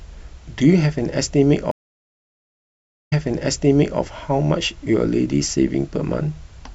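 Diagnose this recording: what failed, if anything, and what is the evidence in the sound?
The network stage failed, with a stream reconnect. At 1.71 s the speech stops for 1.4 s. It resumes 0.89 s earlier than the break, repeating that stretch, and the event ends by 4.00 s. The connection dropped, and a fresh decoder received a resent burst.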